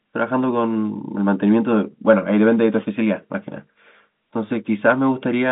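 No technical faults are audible.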